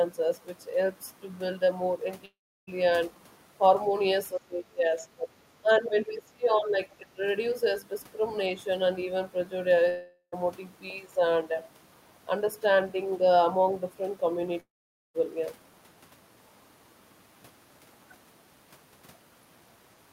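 At 2.25 s the stream most likely suffered a long network dropout: about 0.42 s of packets never arrived, so the receiver stretched the last sound into a brief fading buzz before roughly 0.34 s of near silence. The speech then resumes with that stretch simply gone.

Between 4.35 and 7.23 s, the echo canceller was likely confused by double talk and suppressed the talker along with the echo it was chasing. The speech suppressed in double talk appears three times. From 4.35 to 5.31 s, the level falls by about 20 dB across roughly 0.7 s of it. From 5.62 to 6.79 s, a similar dip of about 20 dB covers about a second. From 6.99 to 7.23 s, a shorter pull-down of about 15 dB lasts about 0.2 s. In each, the speech sinks.

Inside the second of these, from 5.69 to 5.88 s, residual echo from the far end likely slipped past the canceller. This is the other side's voice leaking through as a faint scrap about 30 dB below the talker.

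The second long network dropout, from 9.89 to 10.34 s, again likely came from lost packets, about 0.44 s of them. Here the concealment fill carries most of the gap as a decaying hum, with only about 90 ms of silence before the speech returns.

The third, from 14.60 to 15.16 s, is likely the longest loss, about 0.54 s. A short fading tail gives way to about 0.47 s of silence, and the missing audio never returns.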